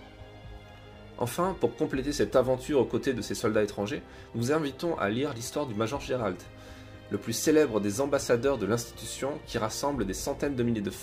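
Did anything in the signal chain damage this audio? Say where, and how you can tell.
No, nothing in the signal chain damaged this audio.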